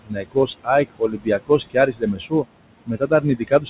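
Noise suppressor artifacts run through the whole recording. The suppressor pulls down the room noise, which sits only about 11 dB under the speech, by about 21 dB in the gaps, then lets it back up beneath each phrase. The background therefore pumps in and out with the speech. With nothing above 4 kHz, which fits a G.711 mu-law call path, the speech already sounds band-limited.

The speech is also cut by the noise suppressor in three stretches, because the suppressor mistakes low-level parts of the speech for noise. From 0.04 to 0.68 s, around a third of a second in total is turned down, by up to about 22 dB. From 0.85 to 2.45 s the losses add up to roughly 0.7 s, with drops of up to about 21 dB. From 2.86 s to the end, dips reach about 18 dB. Soft consonants and word tails sound swallowed or faint.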